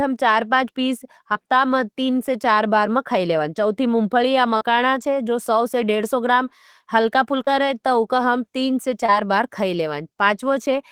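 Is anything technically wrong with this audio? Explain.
Yes. Five brief smears or wobbles interrupt the speech: at 1.33 to 1.37 s, between "चार से पाँच पीस" and "में तीन से चार"; at 4.57 to 4.63 s; at 7.45 to 7.49 s; at 8.17 to 8.20 s; and at 9.06 to 9.10 s. Each is short concealed packet loss. About 20 ms of audio, or 40 ms at 4.57 s, arrived too late to decode. The receiver bridged each gap by extending the preceding sound before blending back into the real signal.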